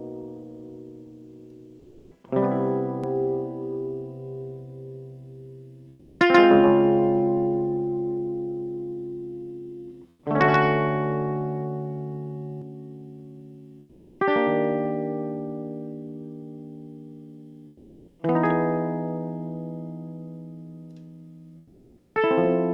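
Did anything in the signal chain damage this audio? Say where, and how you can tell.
Yes. At the call-processing stage, discontinuous transmission likely replaced quiet gaps with comfort noise in place of the background at 1.79–2.11, 5.91–6.19, 10.11–10.23, 13.79–14.19, 17.67–18.19 and 21.59–22.15 s. In each gap the background turns into flat, featureless hiss, up to about 5 dB quieter.

A doubled audio track, likely from a second capture path, runs from 3.04 to 12.62 s. An undecayed copy at about equal level trails by about 150 ms and starts and stops abruptly.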